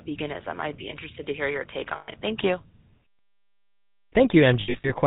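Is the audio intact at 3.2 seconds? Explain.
No. At 3.2 seconds the speech is coming through GSM full-rate coding, same as everywhere else in the clip. That codec rebuilds the voice from a vocal-tract model driven by evenly spaced pulses, with the excitation thinned to every third sample, and it cuts everything above 4 kHz. So you get a dull, band-limited sound with a buzzy, gravelly edge that's plainly audible here, consistent with the old 13 kbps full-rate mode.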